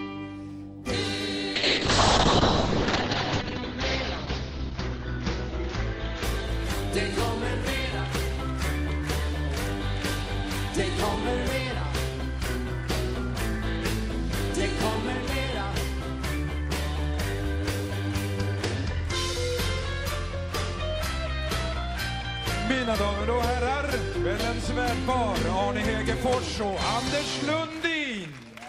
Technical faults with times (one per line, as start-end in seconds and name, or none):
1.56-7.53 call bitrate drop